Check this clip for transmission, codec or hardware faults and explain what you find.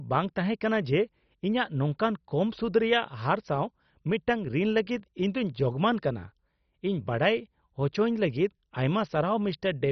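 There is one codec fault, present throughout the speech. It sounds like MP2 compression, likely at about 32 kbps. Upper sub-bands are switched off, so nothing sounds above 6.1 kHz. Surviving bands are coarsely quantised, giving a dull, gurgling, granular sound.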